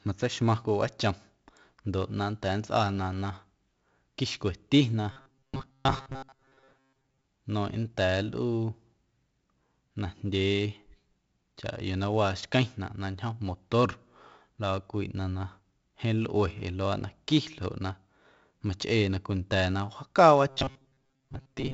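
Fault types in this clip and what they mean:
4-bit ADPCM compression: heavy gritty hiss riding on every loud sound, with nothing above 7.8 kHz, which fits a 64 kbps ADPCM stream.
Robotic sound from repeated short buffers: a rigid metallic 134 Hz buzz from 5.12 to 7.24 s and from 20.5 s onward, likely a 7.5 ms chunk looping.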